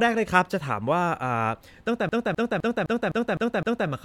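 From 2.09 s to 3.89 s the CD is stuck on one turn. A scratch keeps throwing the laser back, so a 0.26 s slice of speech repeats seven times with brief mutes.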